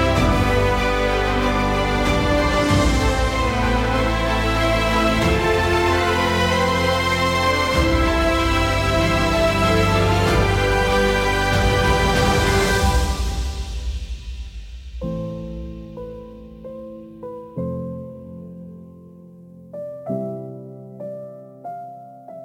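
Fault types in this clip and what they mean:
Sample clock jitter: the converter's timing wanders by a few microseconds, so each sample lands slightly off time, leaving a rough hiss about 30 dB below the sound. Unlike a steady noise floor, it swells with loud, bright passages and disappears in silence.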